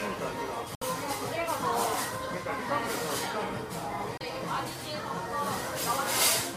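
At 0.75 s the sound cuts to silence for about 64 ms, and at 4.18 s a shorter hole of about 32 ms follows. Both are digital broadcast dropouts: the receiver lost valid frames and muted until good ones arrived. The gap lengths fit two frames and then one frame of about 32 ms each. Unlike a buffer underrun or a skip, the audio resumes further on, with nothing concealed or repeated. The missing material is simply gone.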